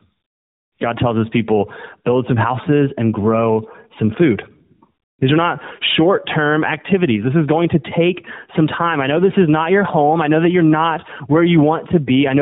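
From start to finish, the speech shows tandem speech coding. It passed through iLBC, then G.711, then AMR-NB, so two speech codecs worked in a row. The second coded the first one's damage again. Speech sounds rough, muffled and warbly, with nothing above 3.8 kHz.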